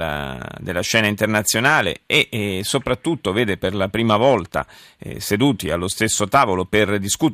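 No technical faults can be heard anywhere in the speech recording: the signal stays continuous and stable throughout, with no breaks, interruptions or changes in level or tone that would point to a problem in the recording or transmission chain.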